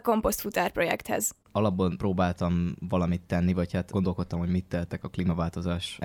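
Listening to the speech recording, nothing stood out as a technical problem.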